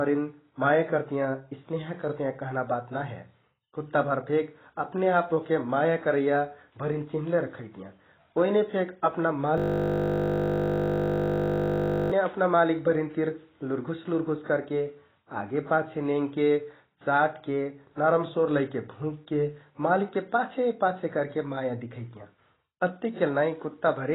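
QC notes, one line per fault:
throughout: AAC compression, likely; nothing above 3.9 kHz, dull smeared speech with fizzy, warbling sibilants, pointing to a very low bitrate near 16 kbps rather than a plain low-pass filter.
9.58–12.12 s: system hang loop; one 20 ms piece of audio repeats exactly, over a hundred times, giving a steady 50 Hz buzz instead of a stutter or silent dropout.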